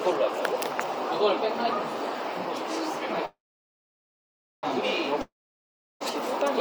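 At 3.25 s a call audio freeze begins: packets were likely held up in transit and the jitter buffer ran dry. The last sound trails off briefly, then about 1.3 s of silence follows until 4.65 s, when the audio resumes where it stopped, roughly 1.4 s late, with nothing lost.

At 5.21 s a long network dropout follows, likely from packets that never arrived. The sound fades into roughly 0.7 s of silence, and when audio returns at 6.02 s about 0.8 s of the original is missing, so it picks up further along.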